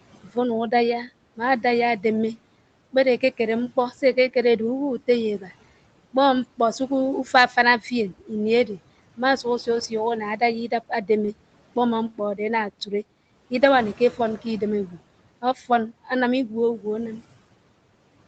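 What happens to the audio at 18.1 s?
At 18.1 s the speech is intact, with only the low room noise beneath it and the call path's usual top end that stops at about 8 kHz.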